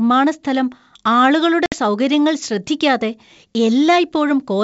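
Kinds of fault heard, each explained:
Packet loss on an ADPCM call: Around 60 ms of speech, about three packets, drops to a hard-edged silence at 1.66 to 1.75 s. The decoder's predictor and step size lose step with the sender's. Speech at "സൗകര്യങ്ങൾ ശ്രദ്ധിക്കാതെ" returns slightly distorted, then settles within tens of milliseconds.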